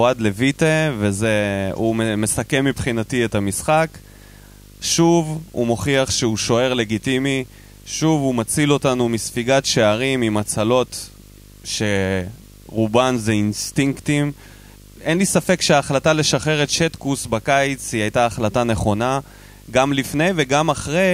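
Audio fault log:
Throughout: video or display buzz. A screen signal leaks into the speech as a 50 Hz buzz with hash, roughly 25 dB down, plus a 15.6 kHz line tone.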